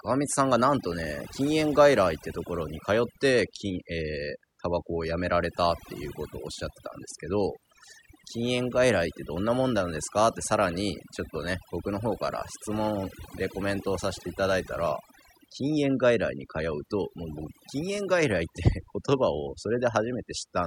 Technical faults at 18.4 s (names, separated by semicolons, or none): overdone noise removal